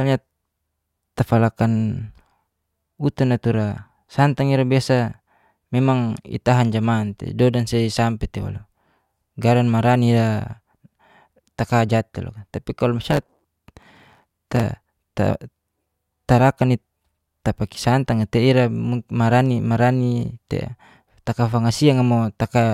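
From 13.08 to 14.64 s the speech carries a block size mismatch (truncated): each block is written longer than the next stage reads, so its tail is discarded. The clipped boundaries leave a buzz at about 92 Hz, which fits 512-sample blocks, and the speech runs 1.07 times fast at about its normal pitch. That faster pacing without silent gaps or repeated fragments sets it apart from a padded mismatch or dropouts.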